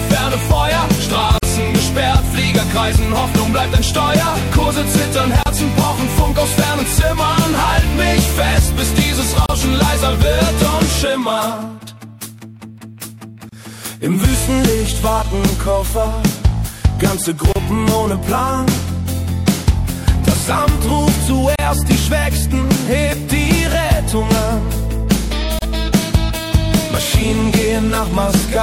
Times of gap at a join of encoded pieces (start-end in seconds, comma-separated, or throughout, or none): 1.38-1.43, 5.43-5.46, 9.46-9.49, 13.49-13.52, 17.52-17.56, 21.56-21.59, 25.59-25.62